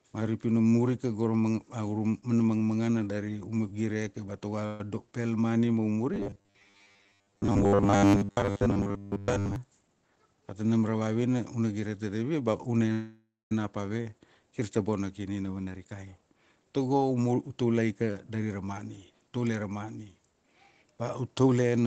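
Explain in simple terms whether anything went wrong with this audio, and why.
Call audio freeze at 4.66 to 4.81 s and 12.92 to 13.52 s: packets likely stalled, so the sound was stretched into a fading buzz, silent for the last 0.2 s of the second one, then resumed with nothing lost.

Robotic sound from repeated short buffers at 6.14 to 9.56 s: fresh audio likely arrived too rarely, so tiny 10 ms slices were replayed for most of this stretch, giving a stiff 100 Hz metallic buzz.

Jitter buffer speed-up at 9.94 to 11.02 s (112% speed), 15.58 to 19.46 s (111%) and 20.19 to 21.73 s (110%): built-up delay was trimmed by snipping tiny pieces, so the speech sounds hurried at the same pitch.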